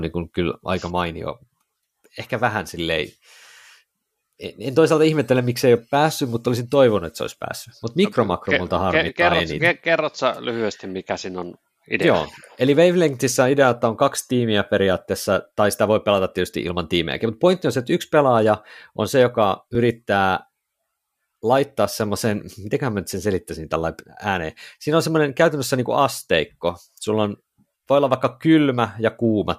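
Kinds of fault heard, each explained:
Repeated buffer: fresh audio failed to reach the playback device in time, so it replayed the block it already held rather than fall silent. At 19.75 s in this speech, a piece of about 2.67 ms, which fits a 128-sample buffer, is heard twice in a row, with a hard join between the copies. Because the repeated piece is so short, it comes across as a small click rather than a stutter, and essentially nothing of the speech goes missing.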